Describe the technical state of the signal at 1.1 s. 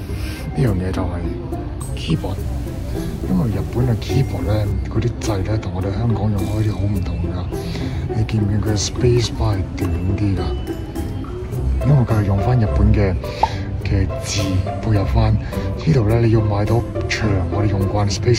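At 1.1 s the signal is intact, with no fault audible at that moment.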